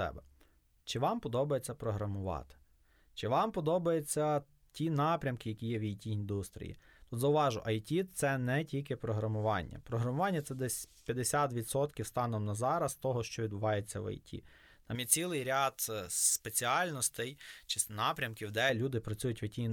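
Pre-emphasis left on from 14.95 to 18.7 s: the treble lift applied before transmission was never undone, leaving about 11 dB extra at 10 kHz, so speech turns thin, bright and sibilant.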